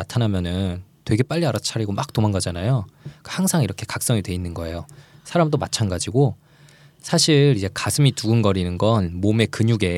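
Listening through this speech recording, nothing stood out as a technical fault at any point.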